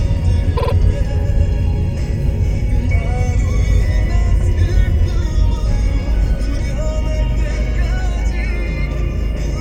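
From 0.56 to 0.72 s there are repeated frames: a block of about 52 ms, which fits two compressed frames, plays three extra times, so the decoder loops the same slice of sound and adds about 157 ms to the clip. It is heard as a brief stutter. On a waveform, identical 52 ms segments sit side by side. A spectrogram shows the same pattern copied.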